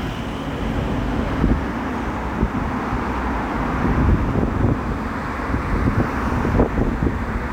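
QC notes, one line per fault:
Throughout: timecode bleed. A steady chirping warble sits behind the sound at roughly 30 dB below it, alternating between pitches near 1 kHz and 2 kHz. Linear timecode from a neighbouring track or cable has leaked into the audio path. The code is a square wave that flips between those two frequencies as it encodes bits. Its pattern repeats at 29.97 frames per second, which gives the warble its fast, regular, machine-like flutter.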